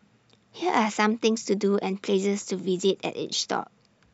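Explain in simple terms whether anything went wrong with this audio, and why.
Nothing went wrong: the speech recording has no audible dropouts, distortion, noise bursts or timing glitches anywhere along its length.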